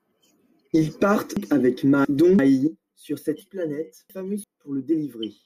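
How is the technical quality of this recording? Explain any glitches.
The recording has two glitches where the speech briefly jumbles.

Chunks out of order, at 1.37–2.39 s (just before "sur cette") and 3.41–4.44 s (just after "sur cette"). In each span, a roughly 341 ms block of audio plays two blocks late, after material that should follow it. The three hard joins this leaves surround a scrambled moment.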